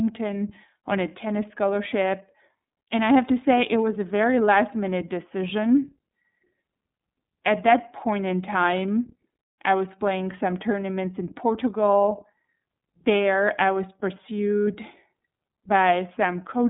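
Throughout the speech, the iLBC codec limits the audio to a 150 Hz to 3.7 kHz line band with nothing above 3.8 kHz. Each 30 ms frame is coded independently, which fits a rate of about 13 kbps. This leaves a plainly rough, synthetic texture that simple telephone-style band-limiting would not produce.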